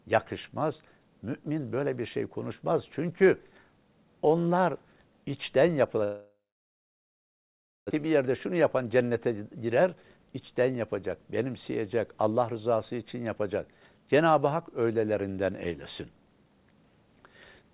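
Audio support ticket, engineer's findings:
Likely long network dropout: packets stopped arriving 6.04–7.93 s, so receiver concealment extended the last sound as a fading buzz/hiss, then held silence for about 1.5 s. Roughly 1.6 s of audio never played; resumes later without it.

Jitter buffer speed-up: buffer overfull after the gap, delay grew by around 200 ms. Receiver trimmed short pitch-period chunks repeatedly, 8.05–10.41 s, dropping around 200 ms total. Playback runs at 109% speed, pitch unchanged, audibly hurried. G.711 mu-law path, 64 kbps, nothing above 4 kHz.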